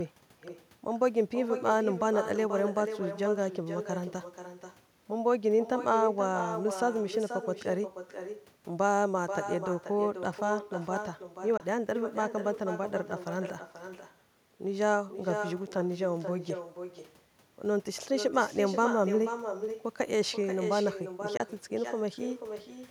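Throughout the recording, the far end plays the call over a loudspeaker and its microphone feeds that sound back with no echo canceller to remove it. Every phrase therefore returns about half a second later, roughly 8 dB quieter, as a thinner shadow trailing the speech.

At 11.57 s and again at 21.37 s, the audio likely suffers a Bluetooth dropout, with data failing to reach the headphones in time. Each time, the speech cuts to silence for about 23 ms, which fits a single lost packet, then resumes further along as though it had kept playing.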